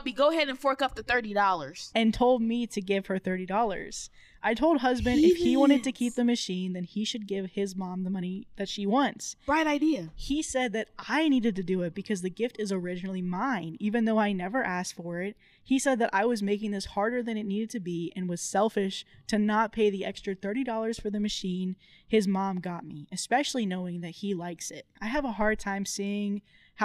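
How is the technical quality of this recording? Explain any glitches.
Nothing here calls for explanation: listening all the way through, there aren't any glitches to point to at all.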